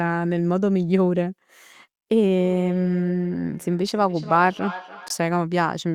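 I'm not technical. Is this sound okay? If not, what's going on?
No. From 2.39 to 5.35 s there is feedback echo between two devices: the speech comes back roughly every third of a second, picked up by a second device's microphone. At 5.08 to 5.10 s, a 20 ms silent gap cuts in, likely a Bluetooth dropout where headphone audio arrived too late and was skipped.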